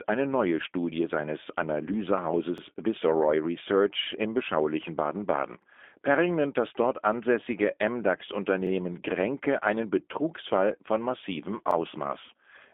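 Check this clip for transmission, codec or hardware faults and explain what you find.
Two faults are present: G.729 codec coding throughout, and overlapping chunks that cause a brief repeat about every 3 seconds.

G.729 codec damage runs through the whole recording. The speech is squeezed into a telephone band of roughly 250 Hz to 3.5 kHz, with nothing above 3.6 kHz, and has a rough, synthetic texture. That texture fits an 8 kbit/s G.729 codec, which rebuilds the voice from a vocal-tract model and a few pulses. A plain band-limiting filter would narrow the sound just as much but leave it smooth.

Overlapping chunks produce four stutters, at 2.58, 5.62, 8.67 and 11.71 s. At each one, 44 ms of sound plays twice because each new 3 s chunk starts before the previous one finished. The even 3 s spacing and the doubled sound set this apart from dropouts, which leave gaps instead.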